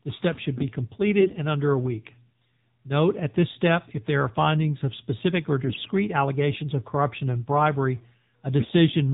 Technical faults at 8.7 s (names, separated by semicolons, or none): AMR narrowband mobile codec; AMR bit errors